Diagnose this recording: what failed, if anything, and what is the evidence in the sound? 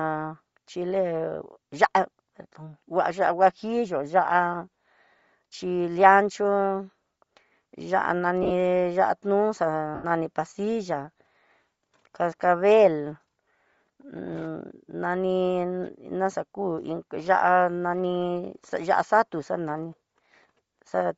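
Bluetooth LC3 compression runs through the whole speech clip, at the codec stage. The upper spectrum sounds thinned and replaced by hiss, giving consonants and vowels a breathy, grainy edge. The damage is plainly audible. This is likely the LE Audio transform codec at a low bitrate, which discards much of the high band and fills it with noise. The result fits roughly 32 kbps with 7.5 ms frames.

Lost LE Audio frames occur at 8.43 to 8.51 s and at 9.95 to 10.05 s, a network or radio-link fault. In the first event about 60 ms of audio is replaced, in bursts scattered over 75 ms, the longest around 30 ms. The second is a single 90 ms gap. In each, the sound turns into a noisy smear, and in the longer second gap it then sinks toward silence. The decoder repeats the last spectrum with randomised phase and fades it, which points to roughly eight and twelve missing 7.5 ms frames.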